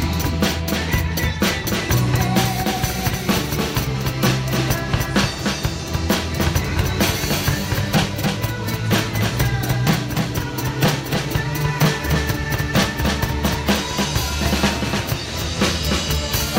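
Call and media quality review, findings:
Doubled audio track, throughout. Second full-band copy trails the original by about 0.3 s. Copy sits roughly 5 dB down. No decay, no room colour, so not reverb or acoustic echo. Likely cause: a duplicate capture through a slower path, or an edit holding two copies out of step. Component: mix or capture routing.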